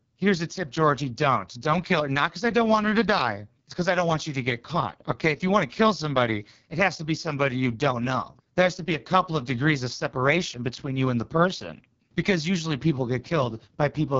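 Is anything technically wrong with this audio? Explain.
Yes. Throughout the speech, the AMR wideband (HD Voice) codec is heavily damaging the sound, consistent with its lowest 6.6 kbit/s mode. Its pulse-driven vocal tract model has too few bits, so the speech turns rough and raspy, and nothing is present above 7.3 kHz.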